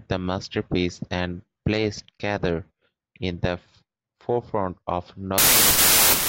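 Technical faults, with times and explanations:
5.38 s to the end, after "forefront of": wrong sample width. Samples seem to be written as packed 24-bit values but read as 32-bit ones, so each read takes mismatched bytes and runs 1.33 times fast. The sound becomes loud noise, with the original buried and higher in pitch.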